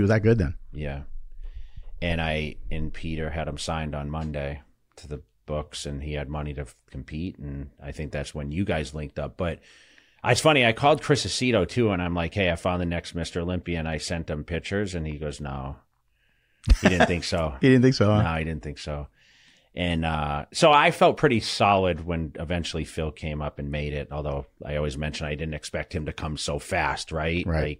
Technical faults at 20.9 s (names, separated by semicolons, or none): none